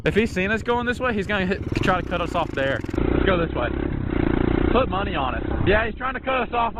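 At 2.96 s the adaptive stream switches to a lower bitrate, fitting Opus 64 to 12 kbit/s: codec artefacts rise suddenly without a gap.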